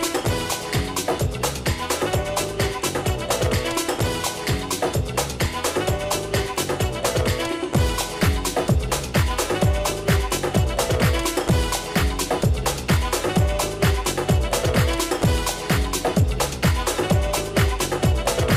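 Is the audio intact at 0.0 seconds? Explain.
Yes, the audio is intact at 0.0 seconds, with no fault present at that moment.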